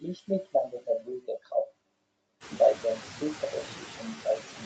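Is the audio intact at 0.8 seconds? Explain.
No, not entirely. At 0.8 s the sound falls inside a run of repeated timing corrections lasting from about 0.26 s to 4.17 s. The receiver is stretching the audio by repeating short pieces, so playback runs at about 98 % of the original pace and adds around 70 ms over the span. Each edit is tiny and unevenly spaced, heard, if at all, as a slight hiccup or unsteady tempo. Unlike a packet-loss concealment burst, nothing is missing or smeared, and the edits all lean the same way.

Those corrections come from clock drift between sender and receiver, present throughout. The sender's clock runs roughly 2 % slow, so the jitter buffer keeps draining and the receiver must keep padding. This differs from a single buffer underrun because it doesn't cause one isolated gap. It produces a steady trickle of small timing adjustments, and 0.8 s falls within that ongoing pattern.

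Noise suppressor artifacts also sit under this moment. The suppressor pulls down bands it judges to be steady noise, by about 18 dB, frame by frame. The background therefore dips in pauses and swells back under the sound. Plain background hiss stays level, but this noise pumps with the signal.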